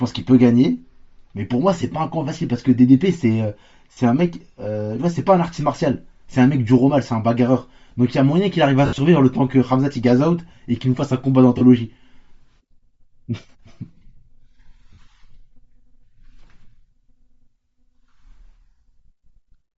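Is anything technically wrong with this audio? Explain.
Yes. The speech carries steady codec damage throughout and four short dropouts. Throughout the clip, the upper spectrum sounds thin and hissy, giving the voice a breathy, grainy edge that is plainly audible. This is likely Bluetooth LC3 compression: the LE Audio transform codec, working at a modest rate that fits roughly 32 kbps with 10 ms frames, discards much of the high band and fills the gaps with synthetic noise. What should be crisp detail comes back as texture.

Lost LE Audio frames interrupt the speech at 3.93 to 3.97 s (40 ms), 8.86 to 8.98 s, 11.58 to 11.62 s (30 ms) and 14.93 to 14.98 s (50 ms). At 8.86 s, about 100 ms goes missing in pieces across 120 ms, with the longest stretch around 70 ms. When a frame fails to arrive, the decoder reuses the last spectrum with randomised signs, so each gap sounds like a brief noisy smear in place of clear speech. 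On the longer gap at 8.86 s, the smear fades toward silence.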